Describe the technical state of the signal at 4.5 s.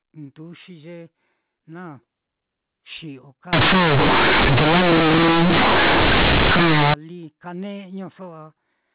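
At 4.5 s the signal is inside a stretch of companded audio read as linear, running from 3.53 to 6.94 s. A-law bytes are played as plain 8-bit samples without expansion, so every sign change throws the output across half its range. It sounds harsh, buzzy and overloaded, with loud noise through pauses. The waveform looks like a flattened block, and the spectrogram shows broadband noise smeared over every frequency band.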